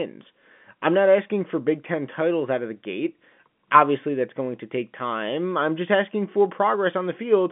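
A speech recording heard over an ordinary G.711 telephone line, with nothing technically wrong to be heard in it.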